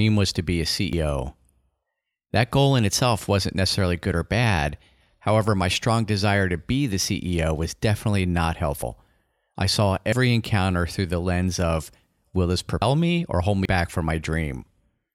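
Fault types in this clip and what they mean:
Dropped buffer (overrun): five times in this speech, at 0.93, 8.82, 10.12, 12.82 and 13.65 s, the sound jumps forward and loses roughly a tenth of a second, as between "I saw" and "encounter through the lens". The likely cause is samples being overwritten before the program collected them. Unlike an underrun, no silent gap appears. The two sides butt straight together, so the speech is cut short rather than paused.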